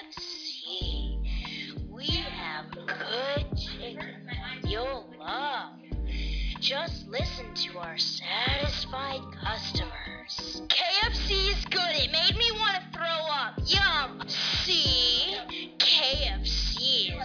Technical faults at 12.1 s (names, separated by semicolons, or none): none